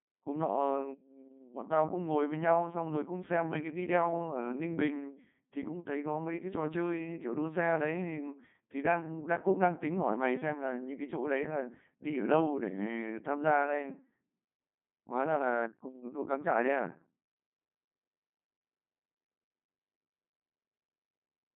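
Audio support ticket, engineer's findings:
Codec 2 vocoder, whole clip. Speech robotic and buzzy start to finish. Waveform not preserved. Decoder rebuilds the voice from sine waves using only pitch, voicing, energy and a coarse spectral envelope. Heavy codec damage. Sounds consistent with a rate near 2.4 kbit/s. Band limited to roughly 150 Hz to 3.6 kHz, nothing above 3.8 kHz. Thin, muffled top end. Probable component: digital-radio voice link.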